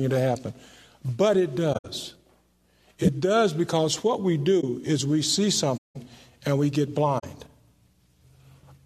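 At 1.73 to 1.86 s a short stretch of audio is covered over. This is a corrupt frame concealed: damaged AAC data was detected, and the decoder filled the gap itself by muting or reusing a scrambled copy of the last good spectrum, so the timing holds. The length suggests about five frames. The same happens at 4.60 to 4.64 s (roughly one frame), 5.77 to 5.96 s (about eight) and 7.19 to 7.25 s (about three). On a waveform these show as rounded dips in the envelope. A spectrogram shows a faded or smeared vertical band instead of a hard gap.

At 3.02 to 3.08 s a brief glitch cuts through, peaking fairly loud, near -10 dBFS. This is a corrupt frame decoded: flipped bits in a couple of frames went undetected, and misread gains and codes put energy at the wrong frequencies. A spectrogram shows a short block of stray energy. The waveform shows a sudden spiky cluster.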